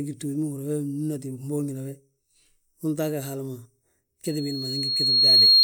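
Loudspeaker feedback squeal begins at 4.25 s and runs to the end of the clip. A microphone was picking up the loudspeaker it was feeding, and at 4.3 kHz the loop's gain passed unity, so that single frequency kept reinforcing itself. It swells over about a second from a faint whistle into a piercing tone that ends up sitting well above the speech, on the order of 15 dB louder, with nothing breaking the loop before the clip stops.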